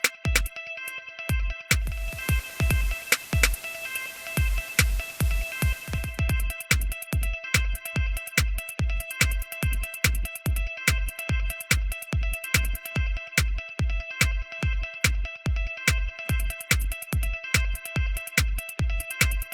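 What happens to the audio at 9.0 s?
Nothing goes wrong at 9.0 s; the audio plays through that moment intact, with no dropout, click or distortion.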